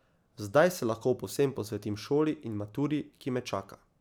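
No audible technical faults.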